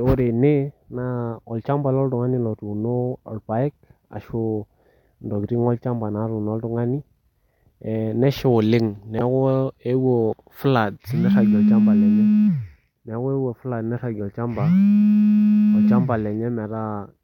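No technical faults are audible anywhere in this recording.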